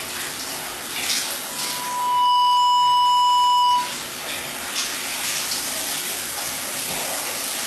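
Throughout, nothing is heard above about 12.3 kHz, and low-bitrate smearing remains. This is likely low-bitrate audio saved at a high bitrate, now in a large MP3.

From 1.48 to 4.00 s, a loudspeaker feedback squeal occurs. A 984 Hz tone swells over roughly 0.7 s to about 5 dB above the sound. The loop gain exceeded one.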